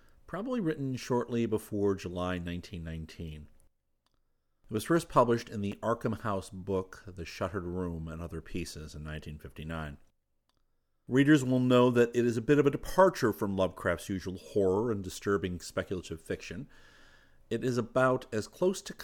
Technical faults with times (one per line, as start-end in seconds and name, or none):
5.72 chunks out of order